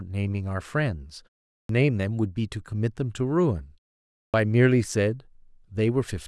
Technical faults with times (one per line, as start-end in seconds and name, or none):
1.54-1.69 clipped start after a pause
4.20-4.34 clipped start after a pause